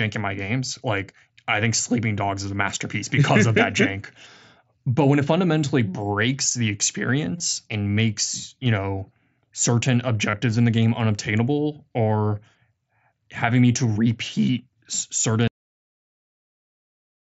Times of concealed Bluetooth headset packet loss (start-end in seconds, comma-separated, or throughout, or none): 7.38-7.40, 10.31-10.33, 13.94